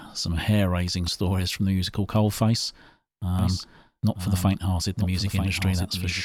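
A doubled audio track starts abruptly at 3.39 s and runs to the end. A second full-band copy of the speech follows roughly a second behind, about 5 dB quieter, with no decay or room colour. It is likely captured again through a slower path.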